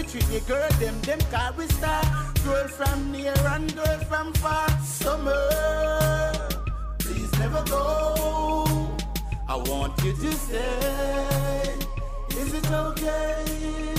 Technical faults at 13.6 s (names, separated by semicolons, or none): Bluetooth SBC bit pool drop